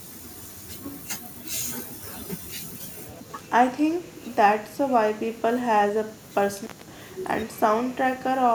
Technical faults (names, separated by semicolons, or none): intermittent contact